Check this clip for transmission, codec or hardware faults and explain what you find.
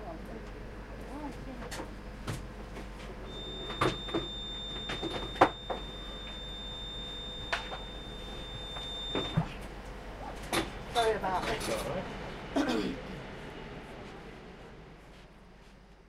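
There is one fault, a feedback whistle, from 3.22 to 9.42 s. A loudspeaker-to-microphone loop was likely running just short of instability, letting a single 3.6 kHz tone sustain without building up. It sits as a thin, slightly wavering whistle a little below the main sound.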